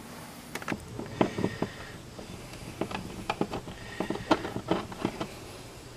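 From 0 to 0.72 s, the audio is read two samples at a time, so it plays at double speed. The reader treated pairs of samples as single frames. Everything runs twice as fast and an octave higher.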